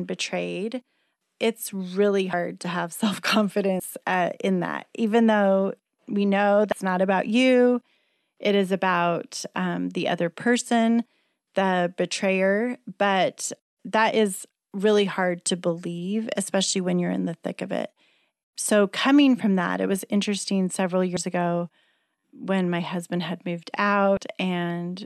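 Compressed frames skipped at 2.33, 3.79, 6.72, 21.16 and 24.17 s: the speech jumps ahead roughly 70 to 300 ms, consistent with ~26 ms frames, each join a brief smeared blip.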